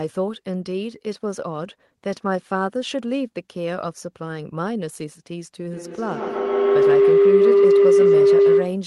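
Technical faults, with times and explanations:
5.7 s to the end, feedback howl: a mic-to-speaker loop gains level on each pass, swelling into a tone near 400 Hz, with a loop delay of about 150 ms, that peaks about 9 dB above the speech.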